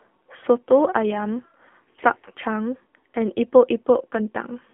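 From start to finish the speech sounds thin, buzzy and synthetic, confined to roughly 250 Hz to 3.5 kHz. This is the AMR narrowband mobile codec: an 8 kHz vocal-tract model driven by sparse pulses, with plainly audible damage that fits a low 7.4 kbps mode.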